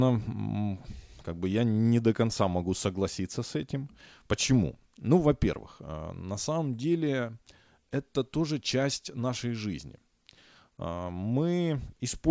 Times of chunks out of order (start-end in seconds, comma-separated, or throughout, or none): none